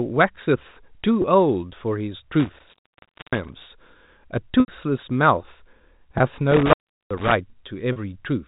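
At 1.22–1.24 s, packet loss with pitch repetition: a 20 ms gap, consistent with one lost packet, is bridged by repeating the last pitch period, giving a brief held buzz rather than a cut. From 2.40 to 3.65 s, an intermittent contact opens the line for about 0.6 s. Crackle marks the edges, and faint hiss replaces the sound, unlike the smooth, tonal fill of concealment. At 4.60–4.68 s, an 80 ms loss repeats and fades into silence before a short cross-fade. Another 20 ms buzz follows at 6.18–6.20 s, and the contact opens again at 6.52–7.32 s for about 0.37 s, with the same crackle and hiss. A final 40 ms repetition comes at 7.92–7.96 s. The G.711 telephone band stays capped near 4 kHz throughout.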